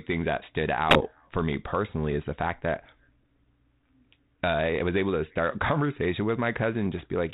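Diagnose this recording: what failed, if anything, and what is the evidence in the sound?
Bit errors on the ADPCM link, a transmission-stage fault: pops and rough bursts with brief level jumps at 0.90–1.15 s, between "things that stood" and "for me personally is", and at 6.98–7.06 s. Each flipped bit derails the decoder's step size and predictor, so the damage rings on briefly. The 32 kbit/s G.726 coding beneath, capped at 4 kHz, is working as designed.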